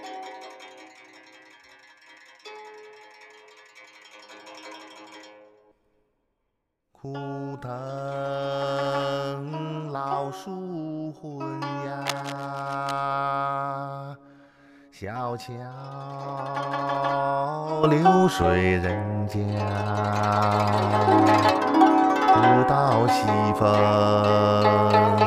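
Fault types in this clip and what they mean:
Cable scratch noise: from 12.06 to 13.0 s, dense uneven rustling about 10 dB below the sound, likely from a worn connector; unlike single clicks, it persists as a burst.
Sudden gain jump: at 17.84 s, sound and background noise both rise 11 dB at once and stay raised, likely an unramped digital gain change, not a gradual fade.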